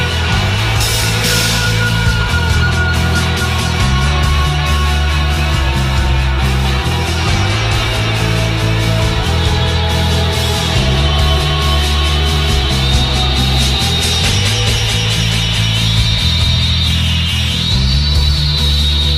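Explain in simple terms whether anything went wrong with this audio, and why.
Nothing went wrong here; no faults can be heard.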